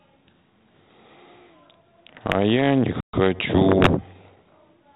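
From 2.08 to 2.34 s, bit errors on an ADPCM link flip a fraction of a percent of bits. Each error throws off the decoder's step size and predictor, giving rough pops and brief level jumps. The band-limited sound fits a 32 kbit/s G.726 link. A playback stall follows from 3.00 to 3.13 s: about 130 ms of silence mid-flow, likely caused by the player running out of data. From 3.13 to 4.43 s, time-compressed catch-up plays the backlog about 1.1 times faster at normal pitch. Within that stretch, from 3.77 to 3.89 s, further ADPCM bit errors at a somewhat higher rate bring another short burst of harsh pops.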